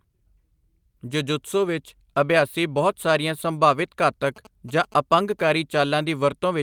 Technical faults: GSM signalling bursts

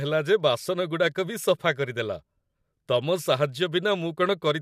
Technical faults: none

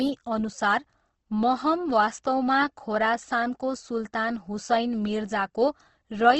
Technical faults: Opus compression

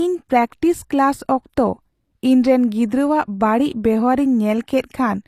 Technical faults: HE-AAC compression

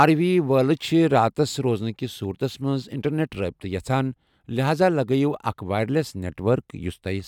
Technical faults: none

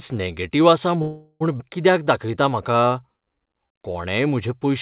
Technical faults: call audio freeze; skip ahead; jitter buffer slow-down

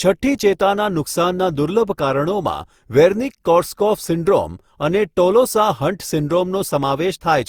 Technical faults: generation loss

